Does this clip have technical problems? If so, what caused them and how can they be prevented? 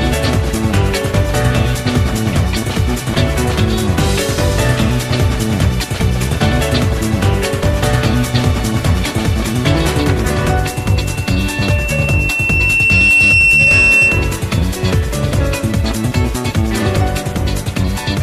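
Yes. From 10.66 s to 14.50 s there is loudspeaker feedback squeal: a single tone at 2.7 kHz swells over roughly three seconds until it sits about 5 dB above the rest of the audio. A microphone was picking up the loudspeaker it fed, and at that frequency the loop gain passed one. Unlike an interfering whistle or a steady test tone, which start at full strength, this tone grows on its own before stopping. To prevent it, keep microphones behind and away from loudspeakers, lower the monitor gain, or notch out 2.7 kHz.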